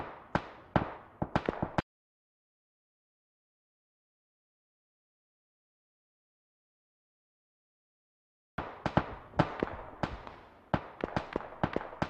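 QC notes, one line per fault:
1.80–8.58 s, audio dropout to silence: sound cuts abruptly to 6.78 s of silence with no room tone, likely from input lost while recording continued.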